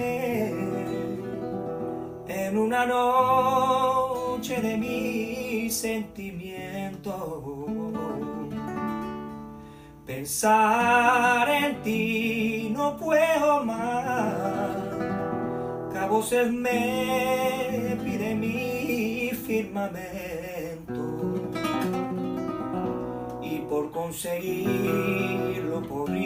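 Listening closely, nothing in the audio stood out as a technical problem at any point.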